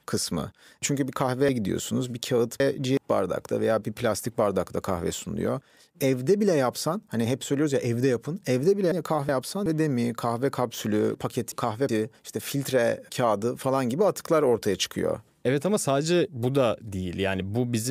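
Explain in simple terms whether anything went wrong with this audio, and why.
Three brief garbled jumbles, at 1.49–2.97 s, 8.92–9.66 s and 11.15–11.89 s, come from chunks out of order: a roughly 0.37-second piece plays late, after the pieces that should follow it.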